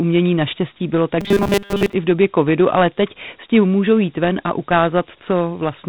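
From start to finish the speech carries Dialogic VOX ADPCM damage. A 4-bit adaptive coder, which at 32 kbps points to 8,000 samples a second, leaves gritty hiss trailing the syllables. A spectrogram shows nothing above 4 kHz and a noise floor that rises with each word.

From 1.21 to 1.93 s, between "naštěstí bylo" and "i v době covidu", the voice becomes a rigid metallic buzz at 200 Hz. This is likely robotic sound from repeated short buffers, with 5 ms chunks looped over most of the stretch. The waveform shows identical repeating cycles, and the spectrogram shows evenly spaced harmonic lines.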